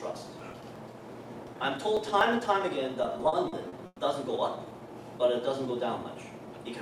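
From 0.15 to 2.45 s you get periodic USB or driver dropouts: something stalls the bus or driver every 0.121 s, and each time a few milliseconds of audio get skipped outright. That gives a steady train of around twenty little ticks riding on the signal.

Then from 3.03 to 4.00 s there's repeated stalling, a stutter: the buffer kept running dry nine times, the longest gap 120 ms, and the last sound was stretched to cover about 290 ms, nearly a third of that stretch. Nothing's lost, but it drags and hiccups.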